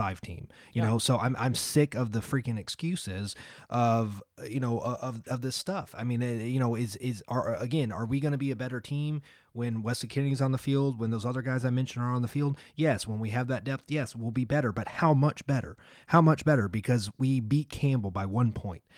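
Speech recording, no technical faults found anywhere in it.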